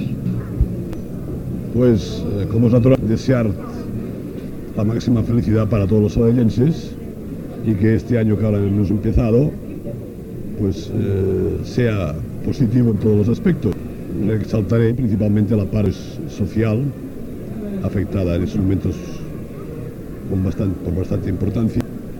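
Five short blips pop up at 0.26, 2.95, 13.73, 15.86 and 21.81 s, and they all come from damaged data in a compressed stream. At each of those points some of the encoded bytes were corrupted, so the decoder misread the frame, lost its place and had to hunt for the next valid header before it could pick up again. What you hear is a brief chirp or squawk cutting into the sound.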